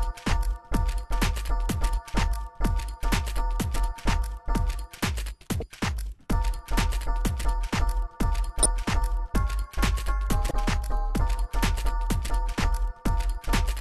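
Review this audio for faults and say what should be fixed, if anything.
Damaged data in a compressed stream at 5.59–5.63 s, 8.62–8.66 s and 10.48–10.51 s: each is a disruption of about 30 ms where corrupted bytes in the encoded data make the decoder misread or reject frames and lose sync until it finds the next valid frame header. To prevent it, obtain the audio again from an intact source and check its integrity with checksums during transfer and storage so the decoder receives undamaged frames.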